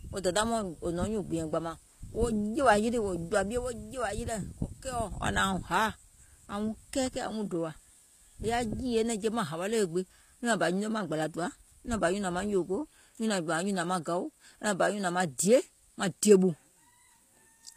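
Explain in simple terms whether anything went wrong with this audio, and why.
The speech was likely squeezed with HE-AAC compression, which stores only the lower sounds and fakes the treble by copying them upward. Throughout the clip, s sounds come out gritty and lispy, and nothing remains above about 14.9 kHz.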